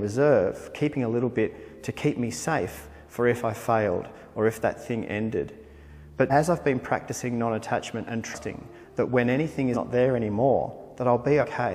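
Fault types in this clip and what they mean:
Compressed frames skipped: at 6.30, 8.34, 9.73 and 11.40 s the audio leaps ahead, losing roughly 300, 200, 100 and 100 ms, multiples of a frame of about 46 ms. Each join is a brief blip or click, not a silent gap.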